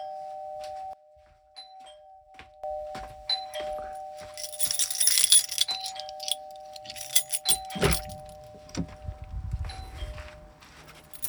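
An everyday sound recording, and from 0.93 to 2.64 s it suddenly collapses by about 19 dB, going faint and distant. That's most likely one channel inverted: with one side's polarity flipped, anything the two channels share cancels once they're summed to mono, so the centred content and low end largely disappear and you're left hearing just the difference between left and right.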